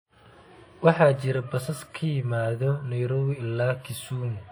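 Speech runs through the whole clip with plainly audible WMA compression damage, likely from an early WMA encoder. Long transform blocks smear quantisation noise around each syllable. That gives a ringing, washy edge and a hiss that swells with the voice. The damage fits a bitrate near 48 kbps.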